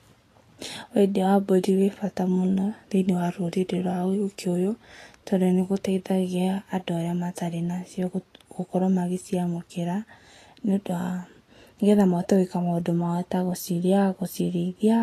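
From start to finish the speech carries plainly audible damage, likely Vorbis compression at a bitrate around 35 kbps: nothing survives above 14.2 kHz, and coarsely quantised treble turns into grainy hiss of similar energy, with roughened tones and blurred attacks.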